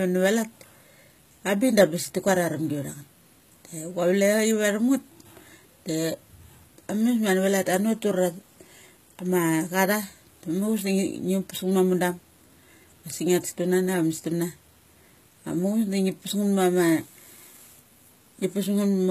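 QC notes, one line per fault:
Throughout, HE-AAC compression, likely the cause: the speech carries plainly audible codec damage, with the treble above the core band rebuilt rather than kept, so s sounds come out gritty, metallic and lispy instead of clean. The top reaches up to a hard ceiling at 14.9 kHz, which fits a low bitrate around 20 kbps. Unlike a simple low-pass loss, the highs are present but synthetic, copied upward, with harmonics that do not line up.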